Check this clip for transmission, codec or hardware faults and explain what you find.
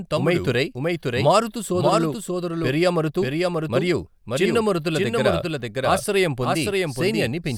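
One fault is present. A doubled audio track runs throughout: a clean, full-band copy of the speech trails about half a second behind at roughly 5 dB lower, likely from a second, slower capture path.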